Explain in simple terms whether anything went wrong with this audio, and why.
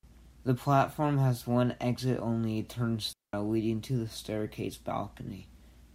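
At 3.13 s the speech cuts to near silence for about 0.2 s, just before "leading to the staircase". This is a digital wireless dropout. The receiver lost data and muted cleanly.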